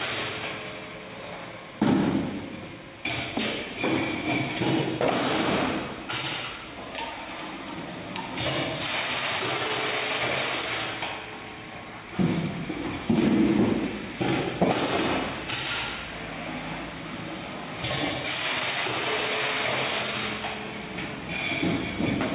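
Nothing goes wrong anywhere in this one; there's no fault to point to at any moment.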